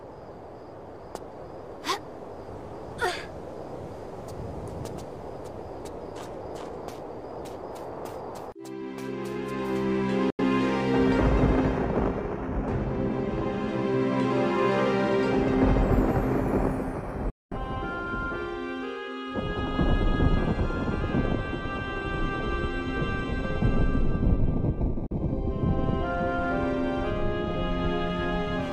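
At 10.30, 17.30 and 25.06 s the sound drops out in digital broadcast dropouts of about 0.13, 0.26 and 0.08 s, each a 3 ms fade to silence. The receiver muted on corrupt or missing frames, consistent with losing two, five and one frames of roughly 43 ms.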